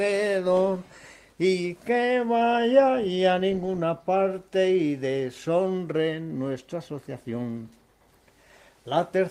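No technical faults are audible.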